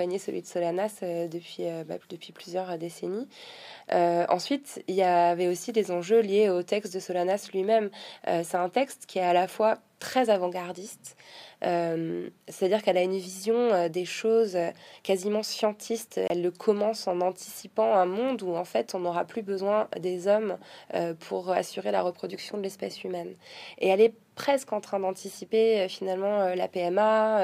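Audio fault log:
16.28–16.30 s, block of digital silence: the playback path likely failed to deliver one output buffer in time, so about 23 ms of samples, which fits a 1024-sample buffer, went out as zeros. The sound drops abruptly to silence and returns without fade, leaving a short hole.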